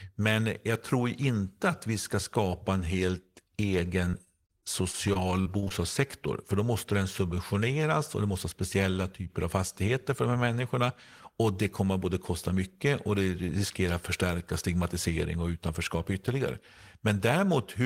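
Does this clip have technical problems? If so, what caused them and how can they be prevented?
Yes. From 4.05 to 5.72 s, repeated packet loss (robotic sound) chops the speech: about a dozen holes, the longest 42 ms, are patched by stretching the preceding sound, giving a robotic stutter with pieces missing. Prevent it with a stable, prioritised network path and a larger jitter buffer.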